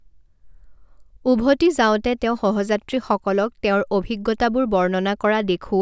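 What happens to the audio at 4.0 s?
Nothing goes wrong at 4.0 s; the speech carries on intact through that moment, with no dropout, click or distortion to be heard.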